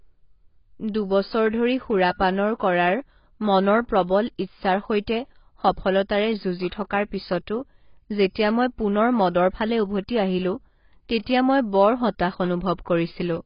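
Throughout the speech, heavy AAC compression is likely at work. The encoder has too few bits, which fits a rate of about 16 kbps, so it discards everything above 5.1 kHz and coarsely quantises the rest. The speech sounds dull and smeared, with a warbling texture on sibilants.

From 6.68 to 6.72 s there is pre-echo. A sharp attack falls late in a transform block, and the codec spreads that block's quantisation noise backwards across 36 ms, so a brief hiss leads the onset and the attack sounds softened.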